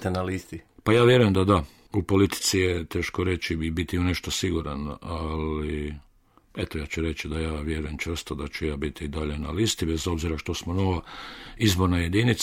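No technical faults are audible.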